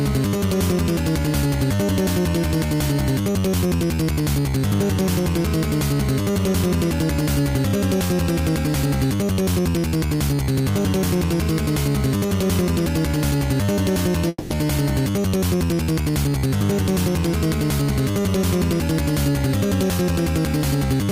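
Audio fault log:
14.28–14.51 s, long network dropout: a fading buzz carries on for 0.22 s, then 20 ms of silence, and sound resumes with 0.22 s lost, likely from missing packets the receiver concealed.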